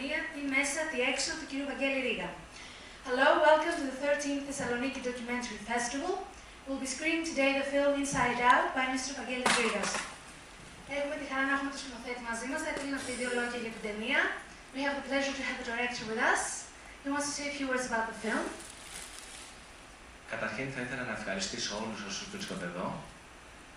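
No technical fault can be heard anywhere in the recording, and the signal stays steady and intact throughout.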